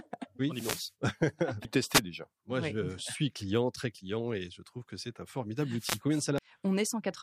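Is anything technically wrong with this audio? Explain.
Yes. The speech has two kinds of fault. Wireless microphone noise hits occur at 0.51 to 0.94 s, 1.92 to 2.00 s and 5.77 to 6.01 s, the last just after "trouve que c'est un". The analogue FM radio link fades as reflected signals cancel the direct one, so receiver noise rises through the gap and is heard as a brief swish of static.

Damaged data in the compressed stream hits at 1.65 to 1.68 s and 6.38 to 6.42 s. Corrupted bytes make the decoder misread frames and lose sync while it hunts for the next valid header, producing a short chirp or blip about 30 ms long.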